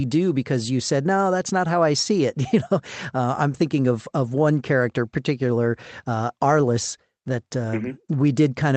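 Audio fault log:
Nothing to log here: the speech comes over an ordinary Opus call line, with the top end stopping around 8 kHz as that path does, and no faults turn up anywhere in it.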